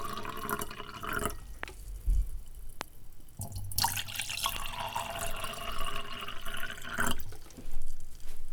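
Loud pops at 1.63, 2.81 and 4.56 s, roughly 15 to 20 dB above the sound, likely voltage spikes from a switch or static; each is a brief sharp thump.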